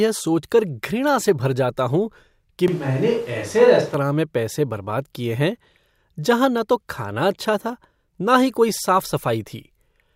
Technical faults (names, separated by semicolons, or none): switch to a distant microphone